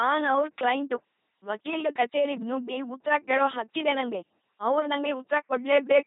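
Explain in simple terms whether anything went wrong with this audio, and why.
Yes: the whole speech clip went through an LPC-10 vocoder, rebuilding it as buzz or hiss through a simple filter, giving a robotic voice with nothing above 3.8 kHz.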